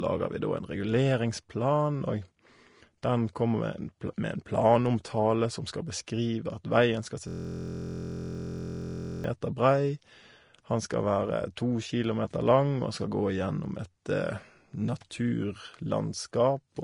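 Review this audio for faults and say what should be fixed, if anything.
From 7.28 to 9.24 s, just after "at veien skal se", a system hang loop repeats one 23.22 ms fragment exactly, producing a 43.1 Hz buzz that fits a 1024-sample buffer. Unlike mains hum, it is a frozen, identical slice of audio.

Throughout, nothing sounds above about 10.6 kHz despite the MP3 container. The likely cause is low-bitrate audio saved at a high bitrate: an earlier lossy encode removed the top end, and a generous re-encode cannot restore it.

To prevent this, encode once from the original source, and keep the audio driver and system from stalling during recording.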